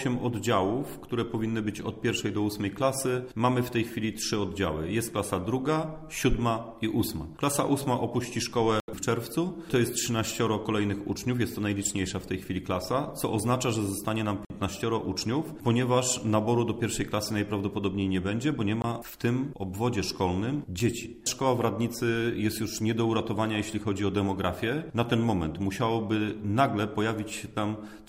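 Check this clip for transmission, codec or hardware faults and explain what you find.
Four blocks of digital silence break the clip. They fall at 8.8 to 8.88 s (80 ms), 14.45 to 14.5 s (52 ms), 18.82 to 18.84 s (20 ms) and 20.79 s (about 6 ms). The sound cuts out and returns with no fade. The longer gaps sound like short holes, and the shortest sounds like a tick. This points to an output buffer that was not filled in time.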